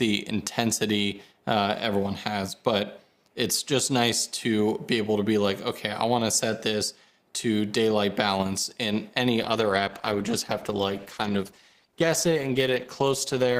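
A call bitrate drop sets in at 9.46 s and lasts to the end of the clip. The audio turns coarse, watery and muffled as high frequencies are cut, which fits the encoder falling from about 96 kbps to 14 kbps after the bandwidth estimate collapsed.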